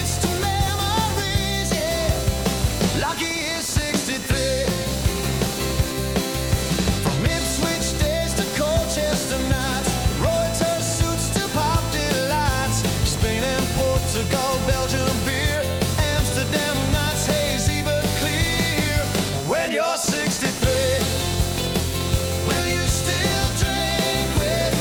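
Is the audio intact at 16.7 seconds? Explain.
No. At 16.7 seconds, as throughout the clip, computer activity noise sits under the sound: a buzzing chirp pulsing at roughly 500 per second, around 10 dB below the signal. It comes from processor or graphics load disturbing the shared ground, and it follows the computer's activity rather than the audio, which separates it from steady mains hum.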